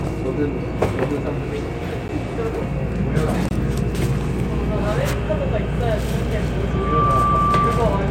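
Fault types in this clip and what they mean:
Block of digital silence: Two stretches of samples drop to silence and then return, with no fade on either edge. At 2.08 s the hole lasts about 11 ms and is heard as a sharp tick; its length fits a 512-sample buffer. From 3.49 to 3.51 s a 21 ms gap, consistent with a 1024-sample buffer, is long enough to register as a brief dropout in the sound.
Loudspeaker feedback squeal: From 6.70 s to the end of the clip, a single tone at 1.2 kHz rises out of the sound. The microphone is picking up the loudspeaker it drives, and at that frequency the loop gain exceeds one, so the tone feeds on itself. It builds in roughly a third of a second and then sits at about 5 dB above the rest of the audio, a steady whistling howl that persists until the recording stops.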